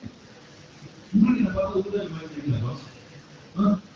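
No technical faults can be heard in this speech recording. The sound has passed through a call's microphone processing and an AMR wideband (HD Voice) link, with nothing above 8 kHz and only light coding traces, which fits a rate of about 12.65 kbit/s.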